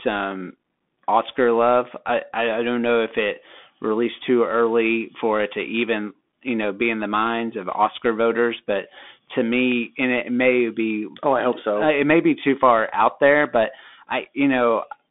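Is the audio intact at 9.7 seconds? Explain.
No. At 9.72 s, between "voters but to" and "and it may be", there is a single sharp click. It is likely from dropped samples: a fraction of a millisecond lost, so the waveform jumps.

The Bluetooth CVSD headset codec also runs through this moment. Nothing passes above 3.8 kHz. Its one-bit slope coding, which fits a 64 kbps stream, makes s sounds scratchy over a grainy hiss.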